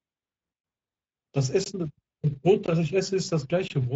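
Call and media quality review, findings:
Speex codec across the whole clip: speech path encoded with Speex, damage consistent with roughly 17 kbps wideband. Too few bits for the excitation gives hoarse, noisy speech with audible codec grit. Nothing above 7.7 kHz.

Gap between chunks at 1.64–1.66 s, 2.66–2.68 s and 3.68–3.70 s: audio delivered in roughly 1 s chunks, each followed by a 20 ms silence, probably from late chunk start or padding. No content lost; heard as short holes at a steady once-a-second rate.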